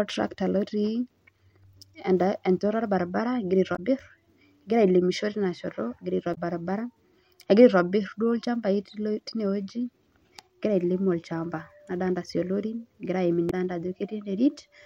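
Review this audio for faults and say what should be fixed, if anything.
Damaged data in a compressed stream causes three faults: 3.72–3.79 s after "enchoto orbaribara egira", 6.31–6.38 s after "shoto egira", and 13.47–13.53 s after "sii ilorin egira aaim". Corrupt frames throw the decoder out of sync until it finds the next header. On a spectrogram each shows as a brief broadband smear or short gap, and on a waveform as a jagged break. Checksums and verified transfers would prevent it.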